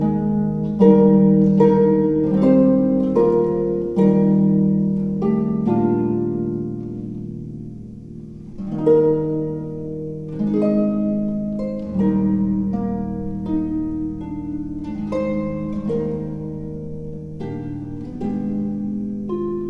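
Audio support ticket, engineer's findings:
No faults found in this clip. No dropout, distortion or timing problem can be heard at any point.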